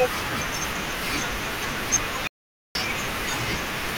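At 2.27 s the speech cuts off mid-flow and returns at 2.75 s, an audio dropout to silence lasting just under half a second. Whatever was spoken in that span is gone. The likely cause is a brief loss of input, such as a link or device interruption, while recording carried on writing silence. Unlike a natural pause or a noise gate closing, the gap holds no room tone at all, and both edges are abrupt rather than faded.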